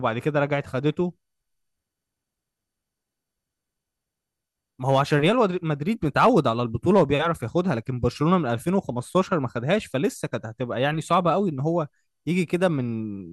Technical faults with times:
4.89-5.29 hard clipping
6.17-6.49 hard clipping
6.96-7.13 hard clipping

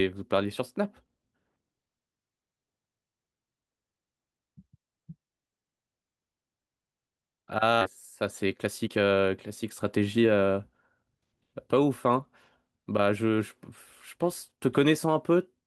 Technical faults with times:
7.81 skip ahead
7.85-10.32 jitter buffer speed-up

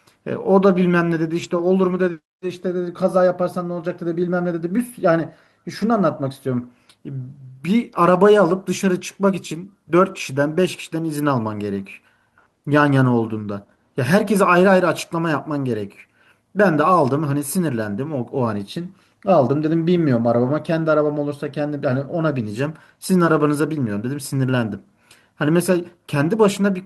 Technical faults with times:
1.39-1.45 lost packet rebuilt from error correction
5.81 lost packet rebuilt from error correction

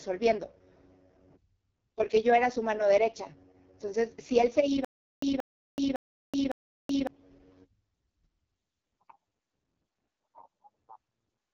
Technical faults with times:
0.00-11.54 AMR wideband (HD Voice) codec
4.85-7.07 stutter with silent gaps

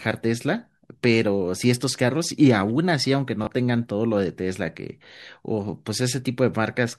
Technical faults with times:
3.45-3.47 Bluetooth stutter

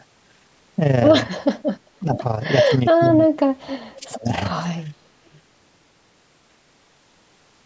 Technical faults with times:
0.00-7.65 overlap-add ripple
1.99-2.20 speech suppressed in double talk
2.14-2.19 echo leak
2.98-4.27 speech suppressed in double talk
3.02-3.09 echo leak
4.01-4.07 echo leak
4.89-5.02 background gated by the echo canceller
5.33-5.40 echo leak

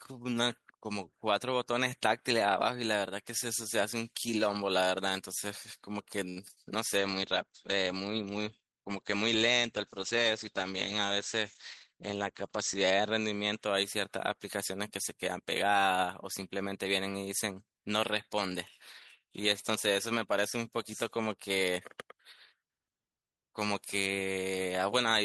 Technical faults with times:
6.29-6.38 short stall from a late packet
6.48-6.51 short concealed packet loss
6.51-6.58 burst of packet loss
6.98-13.65 call bitrate drop
11.92-12.59 jitter buffer speed-up

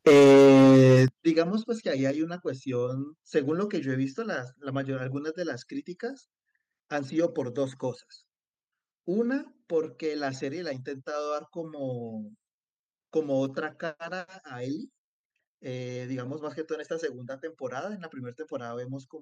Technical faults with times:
0.06-1.05 microphone overload
0.08 microphone volume stepped down
1.08 microphone volume stepped down
2.10 microphone volume stepped down

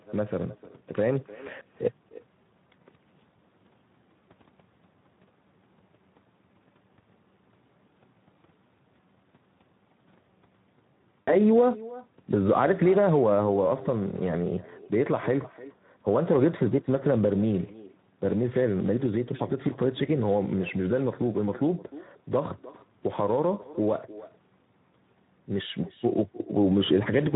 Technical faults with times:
0.00-27.36 echo with no canceller
0.00-27.36 Speex codec
11.21-11.36 VoIP packet loss concealed by the speech codec
23.62-23.67 VoIP packet loss concealed by the speech codec

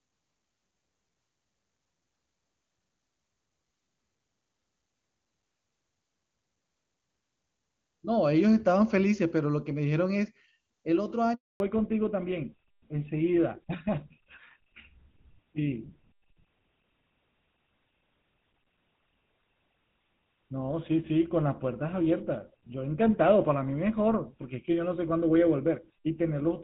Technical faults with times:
11.34-11.60 handover gap
11.60-26.64 fallback to narrowband

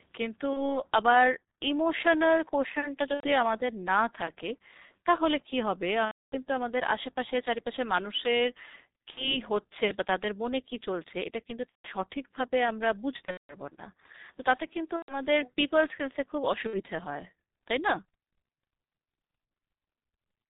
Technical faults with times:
0.00-20.50 G.723.1 codec
0.53-0.82 VoIP packet loss concealed by the speech codec
3.14-3.27 VoIP packet loss concealed by the speech codec
6.05-6.36 VoIP packet loss concealed by the speech codec
9.11-9.37 VoIP packet loss concealed by the speech codec
11.69-11.89 VoIP packet loss concealed by the speech codec
13.25-13.55 VoIP packet loss concealed by the speech codec
14.96-15.16 VoIP packet loss concealed by the speech codec
16.67-16.81 VoIP packet loss concealed by the speech codec

